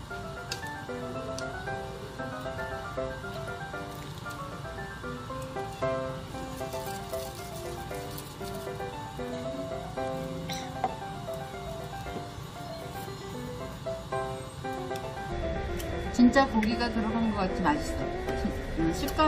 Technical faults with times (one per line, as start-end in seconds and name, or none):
3.36 damaged data in a compressed stream
8.05 damaged data in a compressed stream
15.87 damaged data in a compressed stream